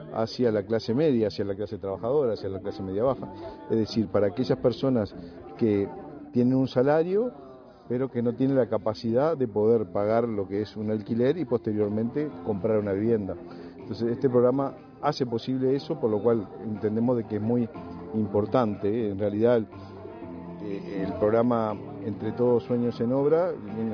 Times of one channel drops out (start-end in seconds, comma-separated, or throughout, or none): none